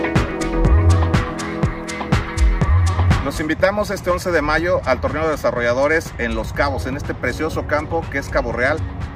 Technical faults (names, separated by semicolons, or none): hard clipping